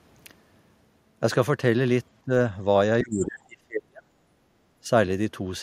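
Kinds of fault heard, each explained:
Speech suppressed in double talk: The speech dips at 2.23 to 2.31 s, 3.02 to 4.12 s and 4.83 to 4.89 s. The longest cut lasts about a second and falls roughly 35 dB. The likely cause is an echo canceller mistaking the talker for echo while the far side spoke.
Background gated by the echo canceller: From 4.4 to 4.55 s the room sound drops by about 8 dB. The echo canceller clamped the microphone down while the loudspeaker played. It let go after about 150 ms, and the background came back.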